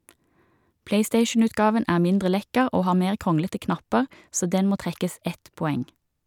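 No technical faults can be heard anywhere in the speech recording, and the signal stays steady and intact throughout.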